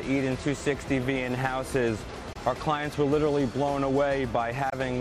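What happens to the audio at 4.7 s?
Right around 4.70 to 4.73 s the sound just cuts out for a moment, a short hole of about 20 ms, then picks up further along as if it had kept playing. That's likely a Bluetooth dropout, consistent with a single packet reaching the headphones too late and getting discarded.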